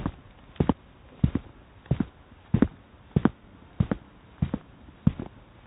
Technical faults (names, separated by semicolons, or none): none